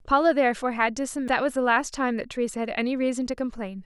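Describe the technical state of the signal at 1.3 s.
Damaged data in the compressed stream at 1.28 s: corrupted bytes make the decoder misread a frame and lose sync, producing a brief chirp, squawk, click or short hole in the speech.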